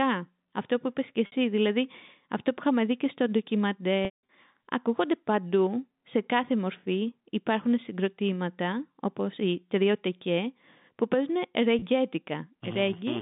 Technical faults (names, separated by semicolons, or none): packet loss with pitch repetition